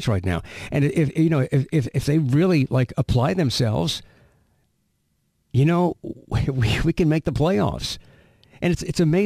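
Throughout, crude rate conversion, apparently 48 kHz to 44.1 kHz, drops samples unfiltered, leaving inharmonic fizz about 30 dB down that tracks loud, bright speech, unlike steady hiss.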